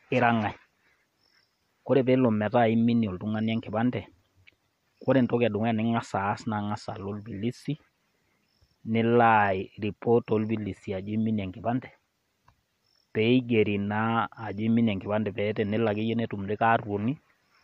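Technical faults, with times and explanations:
No technical faults can be heard in this speech recording.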